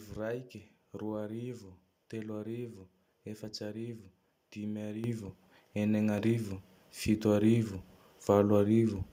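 At 5.04 s, right after "arivo efatse arivo dimy", the microphone volume is stepped up by about 8 dB, and at 6.18 s it steps up again by about 4 dB. The call software judged the input too quiet and raised the device's gain in single jumps. The speech and the background noise floor rise together, abruptly. That sets it apart from a talker leaning closer, which would lift the speech alone, and from smooth automatic gain riding, which ramps gradually.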